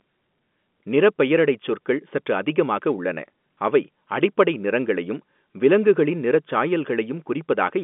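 No faults found: the speech carries the narrow band of G.711 A-law telephone coding at 64 kbps, with the line passing roughly 200 Hz to 3.5 kHz and nothing above 3.8 kHz.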